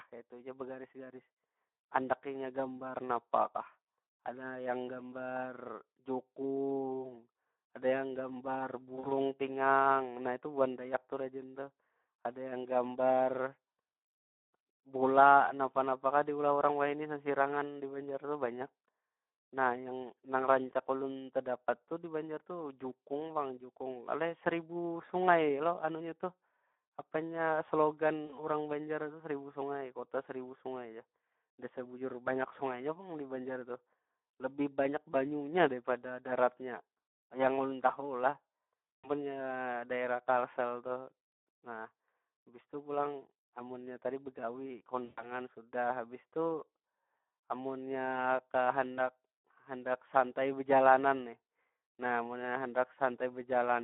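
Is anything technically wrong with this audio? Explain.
Yes. The speech carries Speex codec damage throughout. It sounds hoarse and grainy, fitting a low setting around 11 kbps. The band is held to roughly 200 Hz to 3.5 kHz, so it is muffled. Too few bits reach the excitation, which roughens every voiced sound.

There is also VoIP packet loss concealed by the speech codec at 8.95–9.13 s, 28.25–28.35 s, 38.97–39.10 s and 45.05–45.28 s. About 80, 40, 180 and 120 ms are missing. The decoder stretches its last pitch and filter into a fading buzz or coloured noise. The voice then stays weak briefly afterward.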